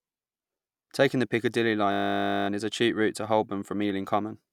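From 1.92 to 2.48 s, a system hang loop. The system froze. Hardware replayed one 20 ms buffer, producing a steady 50 Hz buzz.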